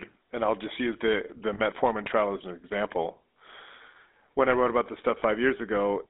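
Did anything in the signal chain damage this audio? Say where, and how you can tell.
Yes. The GSM full-rate codec runs throughout. The speech has a buzzy, gravelly roughness, and nothing survives above about 3.7 kHz or below about 200 Hz. That band and texture point to the 13 kbps full-rate codec. It models the vocal tract as a filter and excites it with regularly spaced pulses, keeping only a third of the excitation samples, so the fine detail of the voice is replaced by a coarse, rasping approximation.

Lost GSM frames occur at 1.54 to 1.60 s and 5.20 to 5.23 s, and point to a network or radio-link stage. Each gap is briefly held as a metallic, ringing tone rather than silence, about 40 ms at the first point and about 20 ms at the second, consistent with two 20 ms frames and then one. The decoder concealed the missing frames by repeating the last good frame's settings, so the sound smears instead of dropping out.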